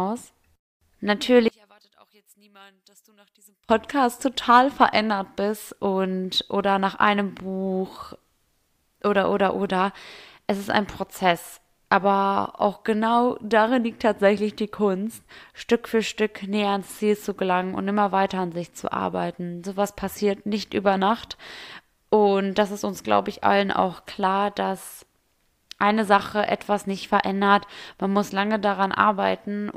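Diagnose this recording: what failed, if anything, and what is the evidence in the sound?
From 1.48 to 3.69 s the speech collapses to a faint, distant remnant, about 33 dB down, then returns intact. That points to one channel inverted, likely a reversed-polarity wire in the analogue path, so the centred voice cancels when both channels sum to mono.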